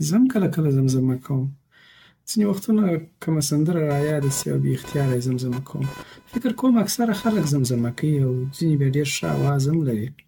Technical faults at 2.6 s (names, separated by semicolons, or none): generation loss